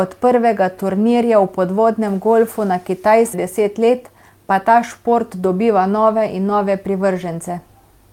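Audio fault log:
3.33–3.35 s, skip ahead: about a second of queued audio was dropped and the two sides were joined directly, so the speech jumps forward with no gap.
3.43–5.63 s, jitter buffer speed-up: the buffer held excess delay and repeatedly cut short pitch-period pieces, removing roughly 150 ms, so speech runs 7% fast at the same pitch and sounds hurried.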